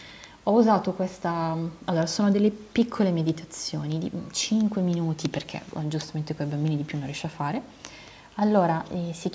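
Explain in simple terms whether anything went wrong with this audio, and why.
Nothing went wrong with this speech recording. It passed through a phone or video call's normal microphone processing, which trims away the deepest bass and leaves nothing above about 8 kHz, so it sounds like a typical call rather than a studio recording.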